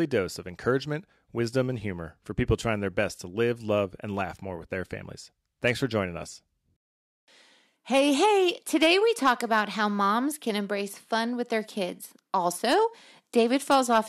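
At 5.66–5.71 s, 7.94–8.24 s, 8.83–9.60 s, 12.71–12.74 s and 13.38–13.99 s the speech shows hard clipping. The peaks exceed what the signal path can pass by about 3 dB, and about 4 dB in the 8.83 s passage, so they are sliced flat. This is heard as a gritty crackle on loud syllables. On the waveform the tops sit as flat plateaus, and a spectrogram shows harmonic energy smeared far up the spectrum during those spans.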